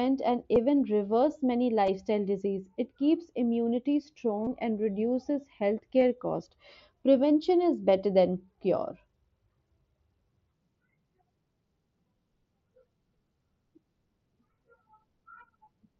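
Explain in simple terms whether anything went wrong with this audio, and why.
A few voice packets travelling from the Bluetooth headset to the phone went missing, an error called concealed Bluetooth headset packet loss. The phone filled each gap by repeating a matching slice of the speech just before it. The gaps are short: at 0.55 s, just before "reverse many"; at 1.86 s, right after "reverse many"; from 4.45 to 4.47 s, between "keeps immunity" and "and reduces"; and at 6.01 s. The single ones are nearly hidden, while the longer ones sound like a brief buzzy tone.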